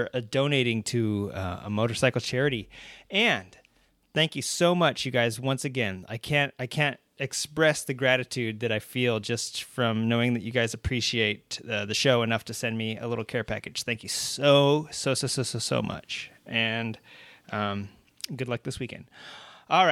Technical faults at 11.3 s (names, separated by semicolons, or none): none